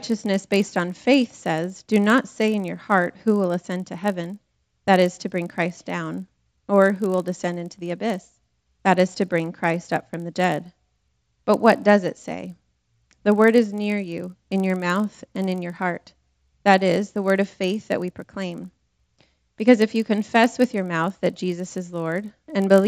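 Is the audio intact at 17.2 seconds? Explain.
No. At 17.2 seconds the audio carries the resampler-restarted-on-every-block fault, which runs through the whole clip. The 16 to 48 kHz conversion was done one 20 ms block at a time, so each block edge has a small error and the sound has a buzz at a 50 Hz repeat rate, present only while there is signal. A spectrogram would show faint vertical stripes every 20 ms, and the waveform small kinks at each block boundary.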